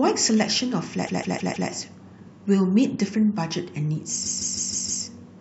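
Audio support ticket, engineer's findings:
Repeated frames, 1.06–1.69 s: stutter, same 156.7 ms block played four extra times, adding 627 ms. Block length fits a run of six compressed frames resent upstream of decoder. Waveform/spectrogram: identical tiled segments.

Repeated frames, 4.25–5.03 s: same fault, same 156.7 ms block, five extra plays, 784 ms added. Likely the same transport or write path duplicating frames. Shows as six matching copies side by side.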